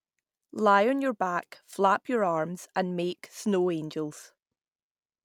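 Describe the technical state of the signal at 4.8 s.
At 4.8 s the speech signal is intact, with no audible technical fault at that moment.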